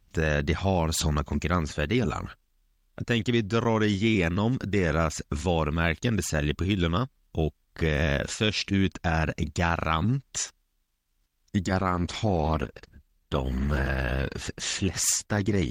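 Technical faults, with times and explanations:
11.79–15.7 s, adaptive stream at a lower bitrate: the speech abruptly turns dull and swirly without a gap, fitting a switch to a much lower Opus bitrate; the spectrogram shows treble cut off sharply.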